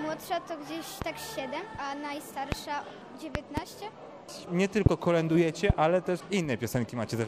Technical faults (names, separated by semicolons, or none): loud pop